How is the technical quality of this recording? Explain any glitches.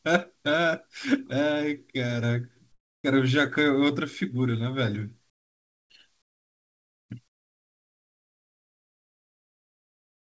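The recording has four pauses where the background is replaced by comfort noise: 2.72–3.04 s, 5.30–5.90 s, 6.22–7.10 s, and 7.28 s to the end. In these gaps the faint background, about 50 dB below the loudest speech, gives way to steady, featureless hiss about 11 dB quieter in the first gap and about 25–27 dB quieter in the others. The likely cause is discontinuous transmission, where the sender stops sending during silence and the receiver synthesises noise instead. Throughout the clip, nothing is audible above 8 kHz, which fits a wideband call codec.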